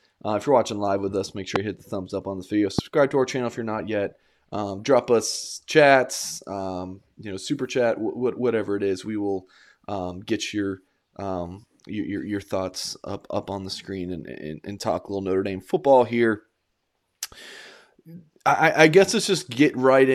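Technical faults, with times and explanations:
1.56–1.58 s and 2.79–2.81 s, loud pop: a single sharp pop after "live with us make", about 20 dB above the speech, then another after "up on this video", about 15 dB above. Speech continues underneath. Likely a brief voltage pulse, such as static or a switch transient, entering the signal path.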